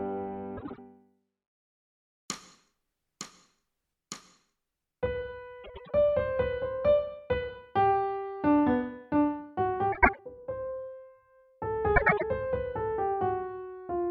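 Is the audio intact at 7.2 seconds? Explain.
Yes, the audio at 7.2 seconds is intact, with no dropout, click, distortion or other fault at that point.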